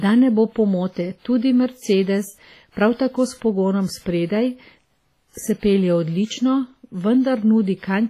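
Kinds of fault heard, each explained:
WMA compression: The speech carries heavy transform-codec damage across its whole length, with a ringing, washy texture and a hiss that swells and fades with the signal. Quantisation noise is smeared over tens of milliseconds around each sound, and weaker spectral detail drops out entirely. Nothing is present above 15.5 kHz. The character fits a low bitrate of around 24 kbps, and the likely cause is Windows Media Audio encoding with long transform blocks.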